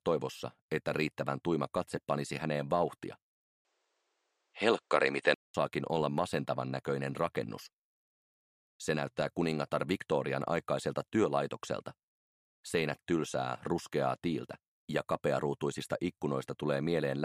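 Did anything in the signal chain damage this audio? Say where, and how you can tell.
Yes. From 3.45 to 5.54 s, after a 200 ms gap, nothing above 9.3 kHz, a shifted level and fresh hiss: likely an input switched to a poorer device. A codec bandwidth drop would not change the noise floor.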